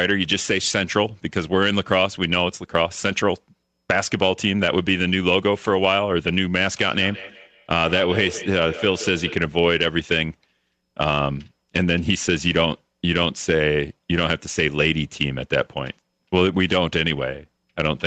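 Speech, passed through a call with nothing above 8 kHz. From 6.9 to 9.49 s there is feedback echo between two devices. The sound returns roughly every 150 ms, thinner and ringing. The loudest repeat is about 13 dB below the speech. A second device in the room is replaying the call, and its output re-enters the microphone. The local echo canceller cannot remove sound it did not play.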